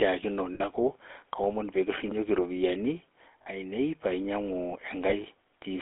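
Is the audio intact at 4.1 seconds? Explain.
No. At 4.1 s, as throughout, the speech carries GSM full-rate codec damage: a pulse-driven vocal-tract model, consistent with 13 kbps, gives a plainly buzzy, gravelly roughness. A spectrogram shows energy confined to roughly 250 Hz–3.7 kHz, with coarse, smeared harmonics.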